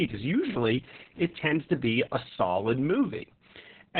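From start to finish, the speech carries heavy Opus voice compression damage. Nothing is heard above 4.4 kHz. That narrowband cut-off points to the SILK linear-prediction coder running at a very low rate, which fits roughly 6 kbps. At that rate the excitation is coded coarsely. The speech sounds muffled and dull. It also turns hoarse and slightly robotic. Consonants lose their crisp upper detail.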